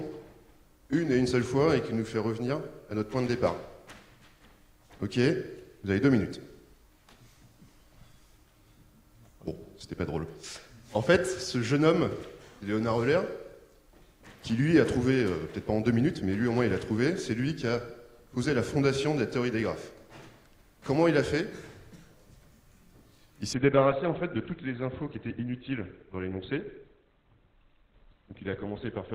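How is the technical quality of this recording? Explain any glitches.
One fault: the last few seconds drop sharply in quality. An adaptive stream at a lower bitrate takes over at 23.53 s and continues to the end at 29.15 s. When the connection slowed, the player switched to a lower-bitrate version of the stream, and the codec had to discard detail. With no gap, the treble disappears at once. Nothing remains above 4.2 kHz, and the sound turns muffled with a synthetic, smeared edge. This fits a switch from roughly 64 kbit/s to 12 kbit/s Opus.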